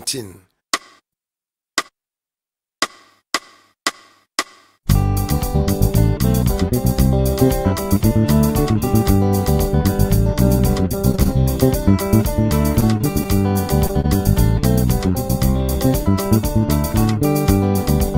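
A burst of repeated packet loss hits at 11.11 to 11.30 s, where five quick holes get patched by stretching the last sound and nearly half that stretch ends up concealed. It comes back at 12.72 to 13.27 s with four more gaps, so the audio goes choppy and robotic both times. Right after, at 13.87 to 13.91 s, there's a short concealed packet loss: about 20 ms never arrived, and the fill smears over that moment. Then at 14.01 to 14.06 s you get a short stall from a late packet, where the jitter buffer ran dry and the sound is held about 29 ms too long, with nothing actually lost.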